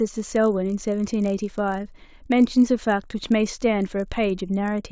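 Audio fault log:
throughout, resampler restarted on every block: a 50 Hz buzz under the speech, from edge errors as each 20 ms block was resampled alone, likely 44.1 kHz to 16 kHz.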